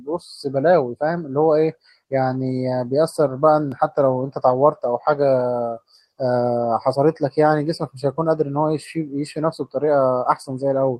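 Nothing in this speech recording stands out as a technical problem, so there's no fault to point to at any moment.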